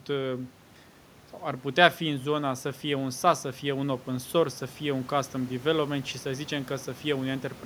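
No technical faults can be heard anywhere in the speech recording, and the signal holds steady throughout.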